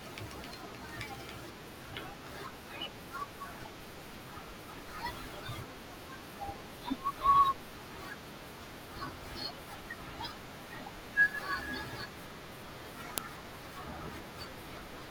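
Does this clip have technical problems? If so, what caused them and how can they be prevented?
Yes. At 13.18 s there is a sharp, loud click in the speech, unrelated to the sound around it: a file header played as audio, where a new WAV piece's header bytes were read as samples at the join. Strip each header before concatenating or streaming the pieces.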